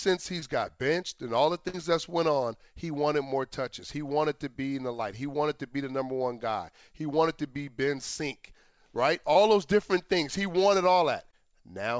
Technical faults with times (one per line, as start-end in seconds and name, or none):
0.40-0.44 short concealed packet loss
1.68-1.75 burst of packet loss
9.33-9.37 short concealed packet loss
11.31-11.34 short concealed packet loss